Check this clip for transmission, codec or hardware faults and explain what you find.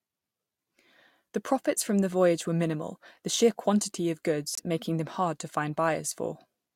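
There's one fault, a corrupt frame muted. At 4.53 s the speech drops abruptly into silence until 4.60 s, a hole of about 64 ms. That length points to two compressed frames of roughly 32 ms each. Their bits got damaged, the decoder rejected them, and the player filled the gap with silence, so the timing of everything after it stays put.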